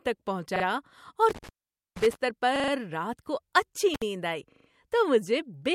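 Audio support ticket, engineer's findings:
Intermittent contact in the speech path, likely a loose cable or plug. Connection opens briefly, so the signal drops out with crackle at the break and remake, and faint hiss remains while open. First break 1.29–2.15 s, open about 0.48 s, the longer dropout. Second break 3.94–4.02 s, open about 59 ms, heard as a short crackling gap. Reseat or replace the suspect connector.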